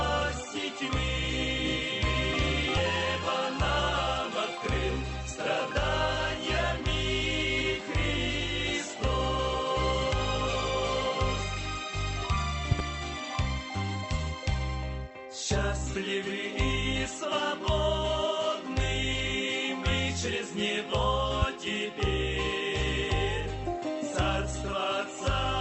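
At 2.77 to 2.79 s there is a skip ahead: roughly 0.7 s of audio never plays, and the stretch before joins almost directly to later material. On a waveform the envelope steps abruptly, and a spectrogram shows a hard vertical seam where the patterns fail to continue.

At 12.71 to 12.82 s a loud pop occurs as two sharp bursts, peaking about 20 dB above the surrounding audio, with the sound carrying on beneath them. A single, slightly quieter pop follows at 21.42 to 21.45 s, about 15 dB above the signal. These are likely voltage transients from a plug, switch or static discharge. Each shows as a tall narrow spike on the waveform and a bright vertical stripe on the spectrogram. The Opus call path limits the audio to roughly 8 kHz.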